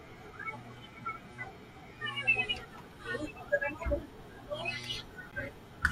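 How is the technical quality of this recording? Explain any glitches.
There's one glitch, near the end at 5.31 s, and it's a gap between stream segments. The timestamps of two neighbouring chunks of the stream don't quite meet, so the player fills the missing stretch with silence, here about 14 ms of it. You hear a short, hard-edged dropout, almost a tick, in the speech. Nothing is actually cut out. The sound just resumes a hair later. The stream is cut into 2-second segments.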